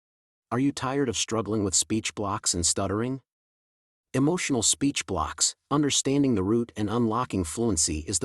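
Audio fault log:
0.71 to 7.51 s, clock slip clicks: faint ticks roughly once a second through the speech, likely from unsynchronised clocks about 20 ppm apart dropping or repeating single samples.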